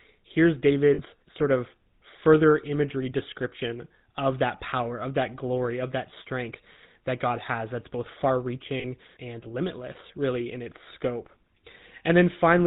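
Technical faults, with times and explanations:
Throughout, GSM full-rate codec: a buzzy, gravelly roughness with nothing above 4 kHz, consistent with a 13 kbps full-rate stream. The codec models the vocal tract and drives it with a sparse, regularly spaced pulse excitation, which throws away fine detail and leaves the voice coarse.
0.94 to 1.00 s and 8.80 to 8.85 s, lost GSM frames: each gap is a short rough, metallic ring over about 40 ms, which fits two 20 ms frames. The decoder repeats the last good frame's settings, so the sound is held and ringing rather than cut.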